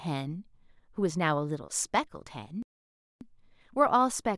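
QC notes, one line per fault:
2.63–3.21 s, playback stall: the speech cuts off in mid-flow and the output falls completely silent for about 585 ms before resuming. The break is a clean gap rather than a fade or glitch, which is what happens when the player stops feeding samples to the output. The likely cause is the buffer running dry or the playback thread being blocked, with audio resuming once data was available again.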